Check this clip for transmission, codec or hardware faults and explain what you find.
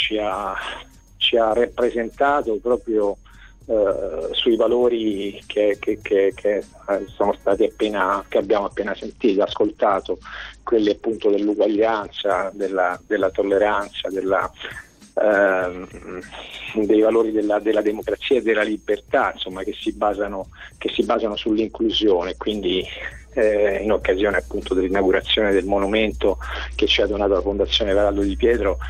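Three Bluetooth SBC bit pool drops are audible, at 8.4 to 12.17 s, 21.06 to 22.47 s and 26.55 to 27.88 s. In each, the link appears to have congested and the encoder cut its bit allocation, which fits a fall from a bit pool near 28 to about 8, or roughly 72 kbps. The upper sub-bands lose their bits and the rest are quantised coarsely, so the treble turns dull and a gritty grain rises until the rate recovers. On a spectrogram the high band goes blank or patchy over those spans, with fuzzy noise smeared through the remaining bands.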